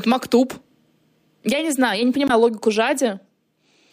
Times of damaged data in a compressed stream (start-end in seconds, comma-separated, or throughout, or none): 2.26-2.31